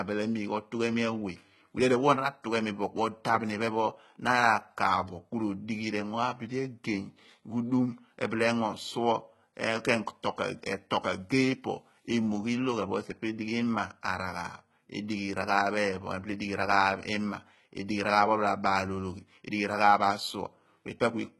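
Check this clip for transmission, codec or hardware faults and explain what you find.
One codec fault runs through the whole speech clip: HE-AAC compression, heavily applied. The damage is consistent with a very low bitrate of around 16 kbps. Only the lower band is properly coded, and the treble is rebuilt by copying lower harmonics upward and shaping them with a coarse envelope, likely from spectral band replication. The copied partials don't line up with the real ones, so sibilants sound gritty, lispy and metallic. On a spectrogram the upper region looks smeared and blocky, repeating lower-band patterns, and stops dead with nothing above 11.8 kHz.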